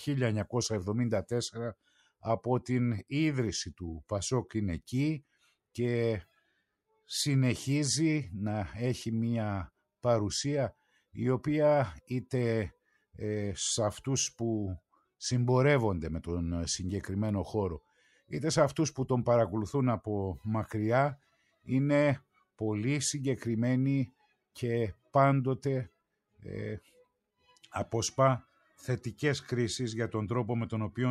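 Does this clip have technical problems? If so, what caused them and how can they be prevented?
Yes. The noise suppressor mistook parts of the sound for noise and pulled them down by about 10 to 18 dB at 1.74–2.24, 5.22–5.51, 17.87–18.31, 21.17–21.68, 22.2–22.43 and 26.8–27.06 s. Each time, the sound sinks for a few tenths of a second. Setting the suppressor less aggressively, or switching it off when the background is quiet, prevents this.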